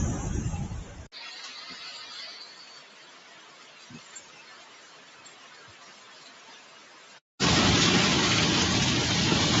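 Noise suppressor applied to the sound, throughout: a speech-tuned suppressor treats steady tones and decaying tails as noise, so level swings by about 20 dB, pumping and thinning held parts while attacks pass.

Sound cut by the noise suppressor, 2.8 to 7.21 s: for about four seconds, sustained material is pulled down by up to about 5 dB, with tails shortened and onsets largely intact, all within the call path's 8 kHz bandwidth.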